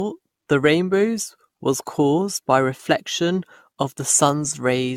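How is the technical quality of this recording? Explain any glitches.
The recording is compromised throughout by generation loss. Across the whole clip the speech sounds swirly, smeared and hollow, with softened consonant attacks, likely from around seven successive lossy re-encodes, consistent with AAC at about 96 kbit/s. Each pass requantised on a shifted frame grid, stacking noise and spectral holes. Unlike a single low-bitrate encode, the damage is worse than that bitrate would produce alone.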